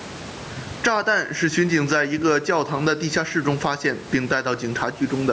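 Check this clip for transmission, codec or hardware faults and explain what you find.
There's one real fault here, gain pumping, and it runs the whole length of the speech. The likely cause is an input gain set far too hot, so a fast limiter clamps down on every loud syllable. You hear the gain swing by around 15 dB, with everything squashed flat. The top end stops by 8 kHz from the call's microphone processing, and there's faint room noise well under the speech.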